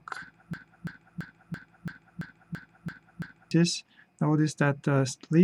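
The audio falls into a broken-record loop from 0.54 to 3.51 s, where a fragment of about 0.34 s plays nine times back to back with no variation. This is likely a stall in the player, encoder or stream that kept resending the last fragment it held, so whatever belonged in those three seconds is gone. On a spectrogram the stretch shows as a row of identical blocks, and the waveform repeats the same shape every 0.34 s.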